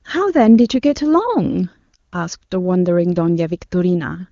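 There are no technical faults to describe in this speech, which is carried over AMR wideband (HD Voice) coding at what sounds like one of its higher rates.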